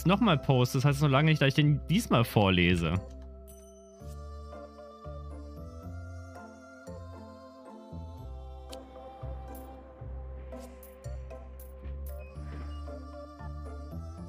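No technical faults can be heard anywhere in the clip.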